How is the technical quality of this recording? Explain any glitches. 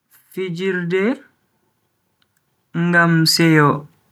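The recording has automatic gain rising twice, from 0.34 to 1.27 s and from 2.73 to 3.87 s. Each time the gain control judged the input too quiet and raised its gain by about 5 dB over roughly a second, so speech and background swell together. On a waveform, the envelope and noise floor ramp upward in step.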